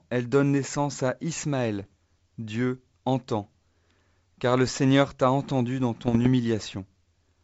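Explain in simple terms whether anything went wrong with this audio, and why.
Bit errors on an ADPCM link cause rough pops at 1.80–1.92 s and 6.05–6.27 s, after "t'a entendu dans". Each flipped bit briefly throws the decoder off.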